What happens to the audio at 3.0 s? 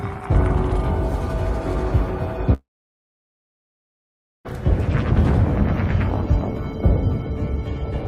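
3.0 s falls inside a long network dropout, 2.53 to 4.47 s. Incoming audio likely stopped arriving, so a brief fading buzz or hiss gives way to about 1.8 s of silence.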